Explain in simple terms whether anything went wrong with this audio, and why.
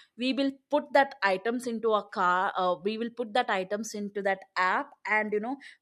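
Nothing went wrong here.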